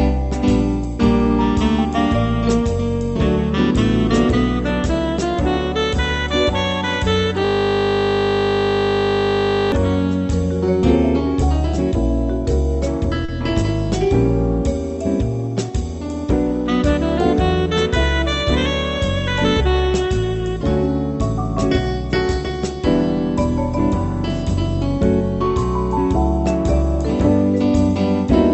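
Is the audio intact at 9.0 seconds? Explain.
No. At 9.0 seconds the sound is replaced by a steady, flat buzz at 50 Hz that runs from 7.45 to 9.72 s. This is a system hang loop: the computer or its audio driver stalled while the playback hardware kept replaying the same 20 ms slice of its ring buffer, over a hundred times in a row. Because the repeated piece is so short, the repetitions fuse into a continuous tone at the loop rate.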